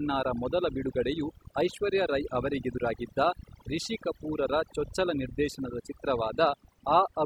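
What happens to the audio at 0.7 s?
Overdone noise removal is audible at 0.7 s, as it is across the whole clip: an aggressive noise reducer cuts frequency bands near its noise estimate deep or off, taking quiet speech detail too, so the background drops and breaks up into twinkling specks.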